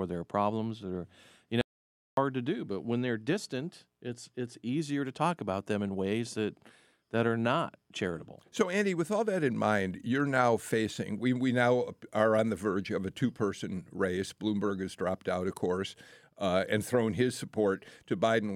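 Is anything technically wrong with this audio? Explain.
Yes, there's an audio dropout to silence from 1.61 to 2.17 s, right after "their problems or you" and before "to do but when". For about 0.56 s everything, room tone included, falls to silence, likely because the input briefly disconnected while recording continued.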